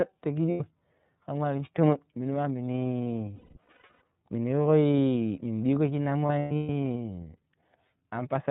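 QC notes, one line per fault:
throughout: iLBC codec, plainly audible. Everything above 4 kHz is gone, and the speech has a rough, slightly synthetic edge; each frame's excitation is coded on its own. The 30 ms framing fits the 13.33 kbps mode.
0.51–0.61 s, 3.36–4.02 s, 6.27–6.69 s: lost iLBC frames. The decoder fills each gap by repeating the last pitch cycle blended with noise, so the speech turns into a held, buzzy, breathy vowel. About 90 ms is missing at the first point. At the second, 510 ms is lost, scattered over 660 ms, with the longest run around a fifth of a second. At the third, right after "shinna mu", 270 ms is lost across 420 ms, with the longest run about a tenth of a second. Because iLBC frames stand alone, the speech recovers almost immediately after each gap.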